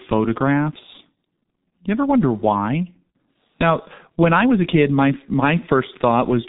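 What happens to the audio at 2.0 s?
At 2.0 s the speech passes through the G.723.1 codec, as it does throughout. It runs in coarse 30 ms frames at about 6 kbit/s and passes nothing above 3.8 kHz, leaving the voice muffled and hoarse with smeared consonants.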